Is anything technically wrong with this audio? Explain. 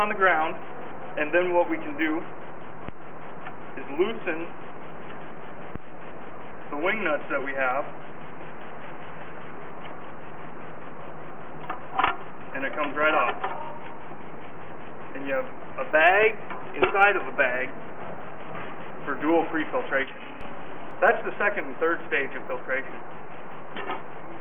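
Yes. A resampler restarted on every block runs throughout: conversion from 48 kHz to 44.1 kHz processed each 20 ms block in isolation, leaving an error at every block edge. The result is a 50 Hz buzz riding on the sound, present only while signal plays.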